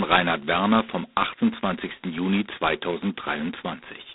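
Harsh, rasping hiss rides on this speech for its whole length, swelling and fading with the voice, inside a narrow telephone band of roughly 250 Hz to 3.7 kHz with nothing above 3.9 kHz: heavy G.726 ADPCM damage, consistent with the codec's coarsest 16 kbit/s mode.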